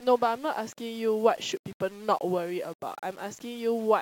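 From start to finish the speech carries a grainy, gritty distortion that tracks the voice, with quiet syllables breaking up. This is low bit depth without dither, likely from rounding to about 7 bits, leaving signal-following error roughly 25 dB below the speech.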